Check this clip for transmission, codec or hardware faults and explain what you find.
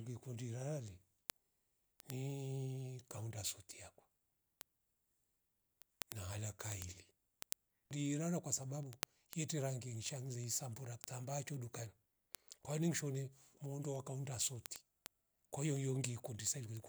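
One fault runs through the speech: word clock ticks from 0.19 s to 16.87 s, around 150 sharp ticks of uneven strength about every tenth of a second. A receiver free-running roughly 200 ppm off the sender's clock slips one sample at each clock crossing.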